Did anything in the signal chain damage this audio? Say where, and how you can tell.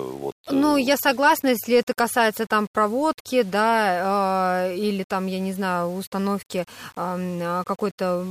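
Yes: low bit depth without dither, likely from sample-format conversion rounding to 7 bits. Quiet speech turns gritty throughout, and unlike steady hiss, the grain tracks the signal, about 30 dB down.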